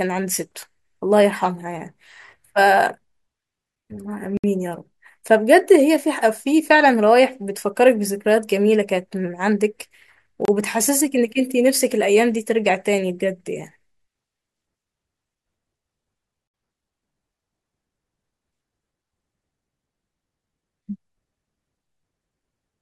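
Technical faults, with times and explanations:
4.37–4.44 s, 10.45–10.48 s and 16.48–16.54 s: gap between stream segments. Holes of 65, 29 and 63 ms recur about every 6 s, where segment timestamps misalign and the player inserts silence. Nothing is lost; speech resumes later. Each shows as a flat waveform and blank vertical stripe with sharp edges.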